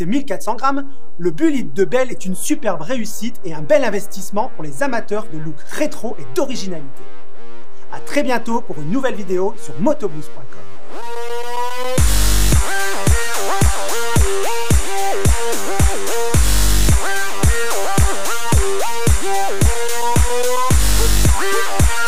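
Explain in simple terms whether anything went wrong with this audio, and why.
DC offset runs through the whole clip, from start to finish. The entire waveform sits shifted away from its centre line by a fixed amount. You can't hear that shift itself, but it wastes room before the signal clips and adds a constant component below audible pitch.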